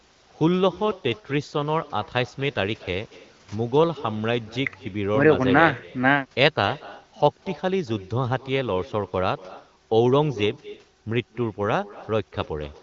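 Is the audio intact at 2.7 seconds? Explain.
No. At 2.7 seconds, as throughout the speech, there is an echo with no canceller: the far end's loudspeaker feeds its microphone and the talker's own voice returns after a delay of roughly a fifth of a second, about 18 dB down. Each phrase is trailed by a faint, thin duplicate. Unlike room reverberation, which smears into a continuous decaying tail, this is a distinct second copy arriving after a clear gap.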